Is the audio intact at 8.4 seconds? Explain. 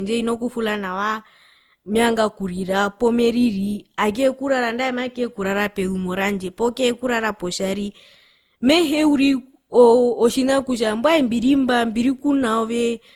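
No. At 8.4 seconds, as throughout, the speech has generation loss, likely from around seven lossy re-encodes. Each pass stacks new quantisation noise, leaving swirly, hollow sound and blurred attacks.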